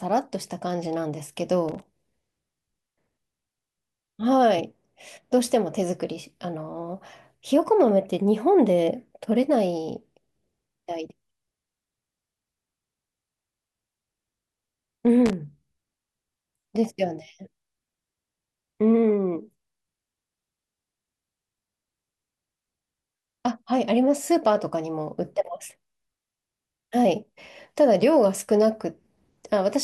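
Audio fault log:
1.69–1.82 s and 15.26–15.33 s, loose connector crackle: two short, irregular bursts of scratchy crackle break into the speech, the first lasting about 140 ms and the second about 70 ms. The roughness comes from a worn or dirty contact somewhere in the cable path that briefly makes and breaks as it shifts. The signal is chopped on and off in rapid, uneven steps, and any DC on the line turns each break into a pop.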